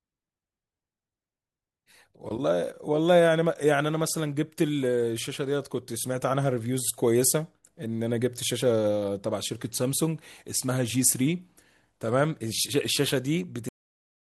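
At 13.69 s the final stretch of audio was never written out or played, leaving a cut-off end. The last buffers of the recording went missing, so the speech stops mid-sound instead of finishing naturally. The signal falls straight to digital silence with no decay or tail, and that dead silence fills the remaining 0.66 s, making the ending sound abruptly chopped rather than spoken to a close.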